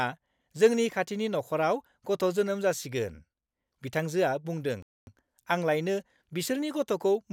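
Right after "बिथांजोआ बुंदों", at 4.82 s, the speech just drops out until 5.07 s, about a quarter-second of dead silence mid-flow. That's a playback stall, most likely the player running dry of buffered data or its thread getting blocked before output resumed.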